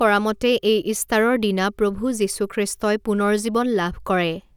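No technical faults can be heard anywhere in the recording.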